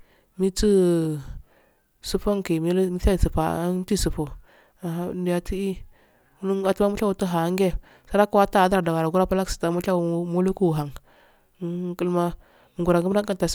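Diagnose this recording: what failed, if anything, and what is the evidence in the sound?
Nothing in the chain from capture to playback shows a failure here, as the speech signal holds its continuity throughout.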